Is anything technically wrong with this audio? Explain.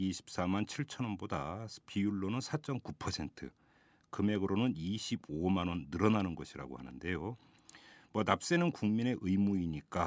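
No, nothing technically wrong here.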